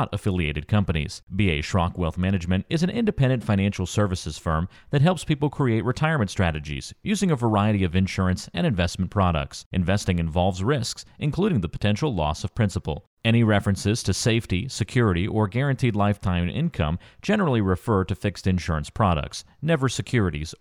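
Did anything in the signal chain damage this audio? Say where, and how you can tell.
No, nothing in the signal chain has damaged this speech recording. There is no point in the clip where any stage of capture, transfer or playback leaves an audible mark on the sound.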